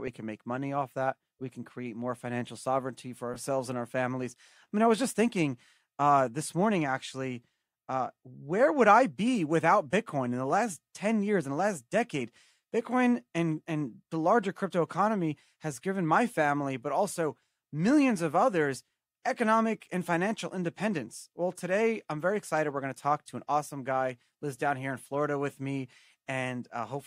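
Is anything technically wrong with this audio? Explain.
Yes. Lost LE Audio frames occur at 3.34–3.37 s, between "more financial sovereignty for" and "and our families I", and at 12.47–12.50 s, just after "in the last decade". The LC3 decoder refills the gaps, which fit about two and three 10 ms frames, by repeating the last spectrum with random signs. The speech briefly smears into a noisy blur.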